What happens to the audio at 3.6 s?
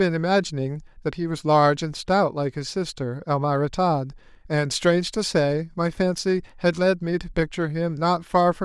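At 3.55 s there is a single sharp click, visible as a thin vertical line running across the spectrum. The cause is likely dropped samples, with roughly one sample missing from the stream, a tiny fraction of a millisecond. With that value gone, the waveform jumps straight from one level to a later one. The gap is far too brief to remove any of the speech; the abrupt step is what produces the click.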